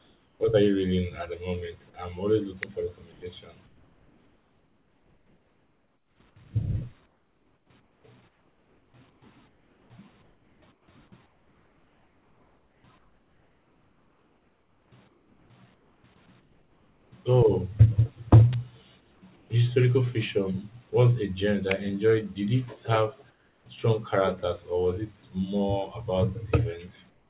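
At the start, up to 0.4 s, the background is comfort noise in place of the real room sound: a steady, featureless hiss about 5 dB quieter than the surrounding background, likely synthesised by the receiver while the sender stopped transmitting during silence. Unlike a noise gate, the pause is filled rather than emptied. At 0.38 s, just before "are you reading at", the onset is clipped by the voice detector. About 20 ms of the start is missing, so the sound begins abruptly without its soft attack, likely because detection lagged. A cut like this falls at an onset, where a dropout would fall mid-sound. At 2.63 s, after "the moment I'm always", there is an electrical switching spike, a sharp snap sitting on top of the audio. It is too brief and isolated to be a crackle, and is likely pickup from a nearby switch arc. The same comfort-noise swap returns at 3.12–6.2 s, 7.06–17.12 s, 19.0–19.5 s, 23.3–23.66 s (about 6 dB down) and 27.1 s to the end (about 5 dB down). 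Further spikes occur at 18.53 s and 21.71 s. All of this passes through a narrowband call path with nothing above 4 kHz.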